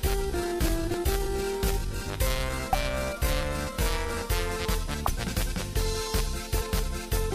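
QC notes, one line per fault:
0.00–4.17 s, time-stretched section: the sound runs at about 0.68 times normal pace with unchanged pitch, likely from software stretching it to fit a length by repeating short pieces. This makes it drag. On a spectrogram, partials look blurred and doubled; the waveform shows repeated cycles.
0.94 s, 2.73–2.75 s, 5.05–5.12 s, 6.61 s, compressed frames skipped: the audio jumps ahead by roughly 100 ms at the first three points and roughly 200 ms at the last. Whole compressed frames are not played there. Each join is visible as a short vertical seam on the spectrogram.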